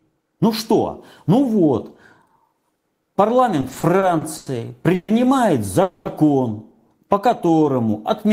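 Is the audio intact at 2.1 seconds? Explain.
Yes, the audio is intact at 2.1 seconds, with no fault to be heard at that moment.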